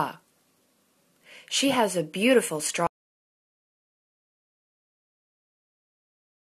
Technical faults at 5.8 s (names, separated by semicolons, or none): audio dropout to silence